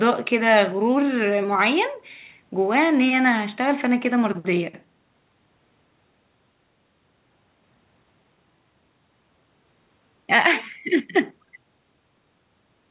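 No technical faults can be heard in the speech. It comes through a WebRTC call path with nothing above 4 kHz, a narrowband limit that fits a G.711 A-law codec.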